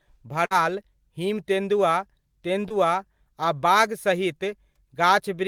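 At 0.45 s a burst of packet loss opens a gap lasting until 0.53 s. The receiver covers about 52 ms by extending the last sound and letting it fade, so a held tone or hiss decays rather than the audio simply stopping. When playback resumes, about 60 ms of the original is gone. That is what separates it from a brief concealment: the fade is audible, and the sound jumps forward past the lost stretch.

At 2.69 s a short concealed packet loss runs to 2.72 s. Here the decoder patches only about 14 ms with continued sound and then blends back into the real signal, with about 20 ms missing in total. It passes as a quick smear or wobble, not a fading tail. The patch is too short to decay noticeably, so the content around it stays continuous and only a fleeting element might disappear.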